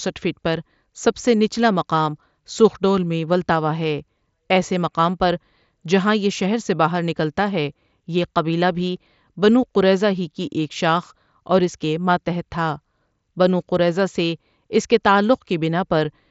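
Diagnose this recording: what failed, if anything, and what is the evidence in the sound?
Nothing failed in this recording: the speech is carried over a Bluetooth mSBC headset link and stops at about 7.7 kHz, as that wideband codec expects, with no dropout, distortion, timing or level fault anywhere in the signal chain.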